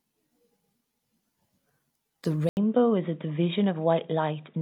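At 2.49 s the speech drops out for 80 ms, then returns band-limited with nothing above 3.8 kHz, dull and boxy, over a faint new noise floor about 45 dB down, at roughly unchanged level, to the end. This is likely an input switched to a poorer device.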